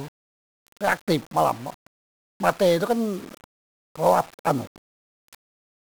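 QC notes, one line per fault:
Throughout: 1-bit DFPWM compression, heavy. Each sample only nudges an adaptive level up or down, so dense broadband hiss and crackle fuzz the speech and bury treble, consistent with a 48 kbps stream.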